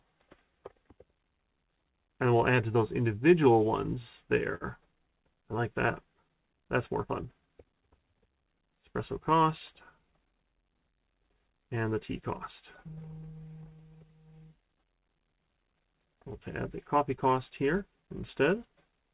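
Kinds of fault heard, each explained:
Short stall from a late packet: At 4.55 to 4.64 s one packet came late, the jitter buffer emptied, and the receiver held the last sound for about 59 ms before resuming at the same point. Nothing is skipped, but the sound hangs briefly with a faint buzzy texture. On a spectrogram the harmonics run flat and smeared for that stretch; the waveform shows a short run of near-identical repeated cycles. The total delay grows by that 59 ms.
Jitter buffer speed-up: Between 9.72 and 10.73 s the buffer held more audio than its target, so the receiver trimmed many small pitch-period slices to catch up. Together they remove roughly 50 ms, and playback runs at about 105% speed with unchanged pitch, sounding slightly rushed. A spectrogram keeps the same harmonic spacing but the events arrive sooner and sit closer together. The waveform shows tiny splices where cycles were dropped. 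The narrowband G.711 call path leaves nothing above 4 kHz throughout.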